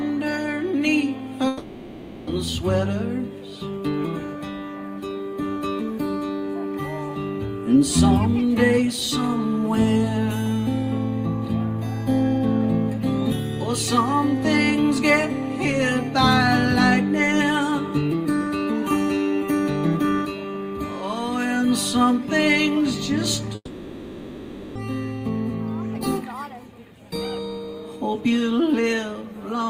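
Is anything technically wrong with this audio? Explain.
Yes. At 1.47 to 2.30 s, and again at 23.55 to 24.78 s, the sound smears into a fading buzzy continuation of what came before, and then the audio resumes further along with a gap in its flow. The first fill lasts 0.8 s, the second 1.2 s, ending in a brief 40 ms silence. This is likely a long network dropout: no audio arrived, so the receiver extrapolated the last sound, and that stretch was never played.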